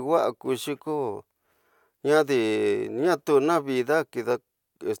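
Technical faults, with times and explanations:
No technical faults detected anywhere in the speech recording.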